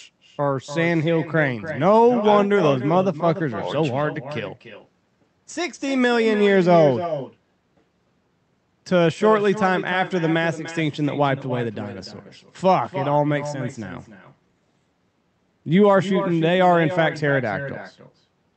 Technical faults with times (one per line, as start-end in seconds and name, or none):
0.00-18.57 echo with no canceller